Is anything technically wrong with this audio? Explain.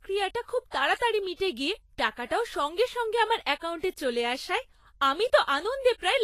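Yes. Throughout the speech there is plainly audible lossy-coding damage, most likely Vorbis compression at a low setting. Nothing is present above 14.2 kHz, and the treble that remains is grainy and hissy, with consonant attacks smeared. This fits a low bitrate around 32 kbps, where the codec describes the upper bands only coarsely, so fine detail is replaced by noise of similar energy. A simple low-pass filter would dull the top end without adding this granular hiss.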